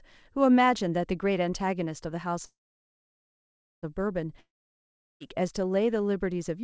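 At 2.46 s the speech halts in a call audio freeze lasting until 3.85 s. The last sound is stretched into a brief fading buzz, then about 1.28 s of silence. Speech resumes exactly where it stopped, now 1.37 s late, with nothing lost. The likely cause is delayed packets draining the jitter buffer.

From 4.41 s to 5.22 s there is a long network dropout. A short fading continuation of the last sound gives way to roughly 0.72 s of silence, and the speech returns further on with about 0.8 s permanently missing. The likely cause is packets that never arrived. Throughout, the audio contains nothing above 8 kHz, which fits a G.722 call codec.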